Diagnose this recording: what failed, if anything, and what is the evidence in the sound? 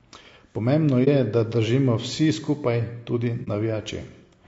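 The codec stage is the likely culprit for the grain heard throughout: low-delay AAC compression of the AAC-ELD kind used for calls, at a bitrate the sound suggests is around 32 kbps. Its short frames give too little frequency resolution to hold pitch harmonics cleanly, and the encoder runs short of bits. The damage is plainly audible across the speech as roughness and graininess, with noise filling the gaps between harmonics and a thin, synthetic-sounding top band.

Further down the chain, at the network or transport stage, there is AAC frame loss with muting at 1.04 to 1.08 s, just before "da držimo vsi skupaj", and again at 3.44 to 3.48 s. Each gap fits a single lost frame of about 30 ms. The decoder replaced the missing spectrum with silence, and its overlapping windows faded the sound out and back in, so each dropout is a brief dip.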